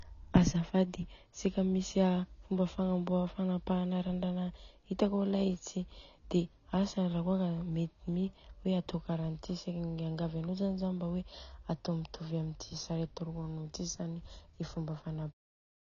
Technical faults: AAC compression

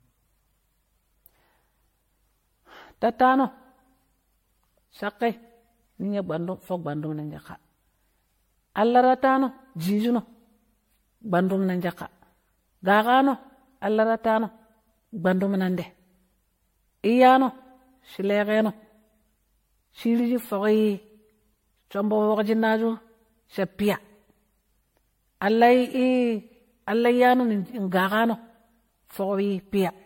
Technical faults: generation loss

